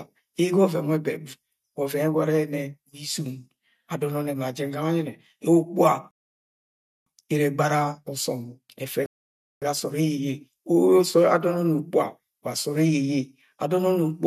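Speech with two rebuffering stalls, at 6.11–7.06 s and 9.06–9.62 s, adding 0.96 s and 0.56 s of silence. Unlike a dropout, nothing is skipped: playback resumes exactly where it stopped.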